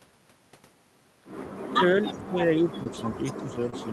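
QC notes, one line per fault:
1.66 to 3.92 s, speech suppressed in double talk. From 1.66 s to the end, the talker's level sinks, at its deepest by roughly 20 dB. Parts thin out or break into pieces. The likely cause is the far side talking at the same time. The echo canceller could not tell the near talker from the loudspeaker echo. So it turned everything down together.
2.27, 2.41, 2.59, 2.79, 2.85 and 3.72 s, lost packet rebuilt from error correction. Each event is one 20 ms stretch. The packet itself never arrived. The next packet carried a low-bitrate backup copy, and the decoder played that instead. There is no gap. Each spot sounds briefly rougher and grainier than the 40 kbps Opus audio around it. That audio is itself capped near 12 kHz.
2.83 to 2.87 s and 3.70 to 3.74 s, short concealed packet loss. Each time about 20 ms went missing. The receiver filled roughly 20 ms by extending the last sound and its pitch or noise. 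It then crossfaded back into real audio. This is heard as a short smear or wobble. Both events end with an error-corrected packet.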